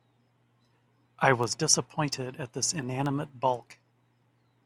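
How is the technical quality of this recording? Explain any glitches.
The recording has one clocking fault. From 0.27 to 4.45 s, word clock ticks repeat about every 0.2 s. An unlocked receiver clock, roughly 100 ppm off, drops or repeats one sample at each tick.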